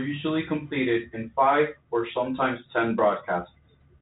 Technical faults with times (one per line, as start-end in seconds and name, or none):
none